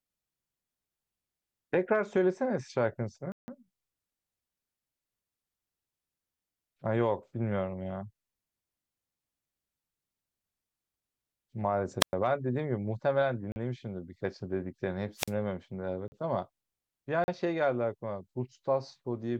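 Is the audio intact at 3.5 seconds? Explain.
No, not quite. A block of digital silence runs from 3.32 to 3.48 s, ending just before the 3.5 s mark. For 160 ms the speech is replaced by silence, with no fade in or out. That points to the output buffer not being filled in time, or to invalid values being zeroed. It is heard as a short hole in the speech.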